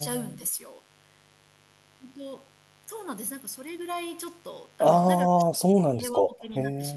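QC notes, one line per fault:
Throughout: mains buzz. Sharp switching spikes from the power line leak into the signal path twice per 50 Hz cycle, spraying harmonics up into the kilohertz range. The result is a steady, raspy buzz sitting around 25 dB below the speech.
5.28–6.82 s: speech suppressed in double talk. The likely cause is an echo canceller that could not tell the local talker from loudspeaker echo while both sides spoke, so it turned everything down. The speech dips by as much as 25 dB over about one and a half seconds.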